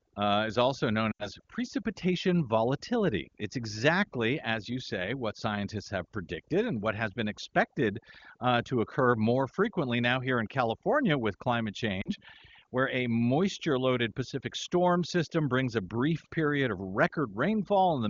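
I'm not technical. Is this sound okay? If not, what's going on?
No. Two things are going on. First, there's overdone noise removal all the way through. A cleanup tool was pushed too hard, so the background drops and breaks up into twinkly specks, and the voice loses its quieter parts, which got scooped away too.

Second, there are lost AMR speech frames, a phone-network glitch where bits of the signal were garbled by radio errors and had to be thrown out. The phone papers over the gap by stretching the last good sound and fading it. You'll hear a short smeared dip from 1.11 to 1.28 s, roughly 80 ms, which fits about four missing frames, and a briefer wobble at 12.01 to 12.10 s, around 40 ms, so likely two frames. The HD Voice call coding itself adds little or no damage.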